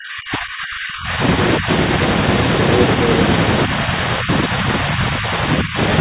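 Speech that sinks in four places: from 0.0 to 1.21 s it drops by roughly 35 dB, then briefly from 1.59 to 1.69 s, more gently from 3.67 to 4.3 s, and again from 4.47 to 5.78 s by around 10 dB. This is likely speech suppressed in double talk, where the echo canceller, unable to tell the talker from the loudspeaker echo, pulled both down. At 2.76 to 2.83 s a short scrap of a second voice cuts in, only a few decibels below the talker, which points to the other side's voice leaking through from the loudspeaker past the echo canceller. The audio also has nothing above 4 kHz, which fits a G.711 call codec.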